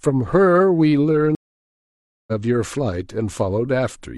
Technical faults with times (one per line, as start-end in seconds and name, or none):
1.35-2.32 stream reconnect